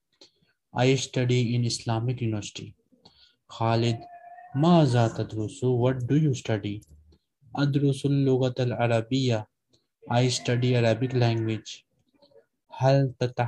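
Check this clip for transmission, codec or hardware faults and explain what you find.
Nothing stood out as wrong on listening through the clip.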